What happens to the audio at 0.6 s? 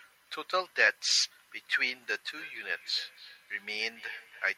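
Nothing goes wrong at 0.6 s; the speech carries on intact through that moment with no audible fault.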